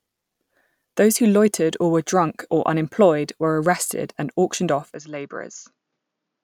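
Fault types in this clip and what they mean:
Input switched to a poorer device: the recording likely moved to a narrower-band input at 4.94 s; nothing above 7.1 kHz remains, level falls about 5 dB, with no gap.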